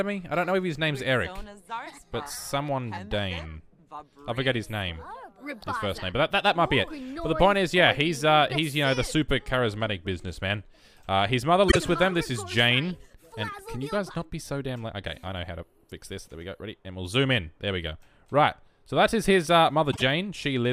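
Frames out of order in two spots, around 11.68 to 11.77 s and 19.92 to 20.02 s: adjacent 24 ms chunks, likely single codec frames, get swapped, giving a quick garbled flutter.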